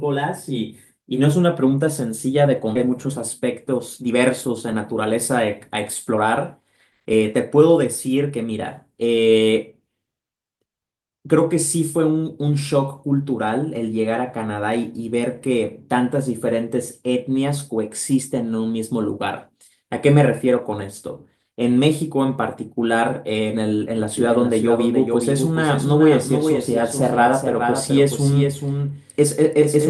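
At 2.75 s there's a skip ahead: about a second of speech just vanishes and the two sides butt together with no gap. Right after, the jitter buffer speed-up kicks in as it trims its backlog, snipping tiny pitch-period slices. The speech gets hurried at 118% from 2.83 to 3.06 s, 112% from 3.48 to 5.17 s, 161% at 6.10 to 6.18 s, and 114% from 7.00 to 8.91 s, all without changing pitch. From 24.17 s to the end there's a doubled audio track: a dry full-band copy about 5 dB down trails roughly 400 ms behind, likely from a second, slower capture path.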